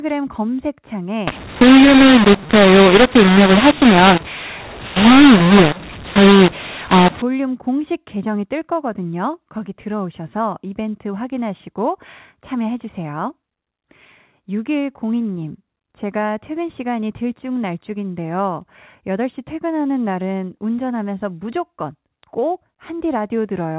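A speech clip in which, from 1.27 to 7.22 s, mu-law and A-law are mixed up: mu-law coded audio is decoded as A-law, scrambling levels into harsh distortion and filling pauses with noise.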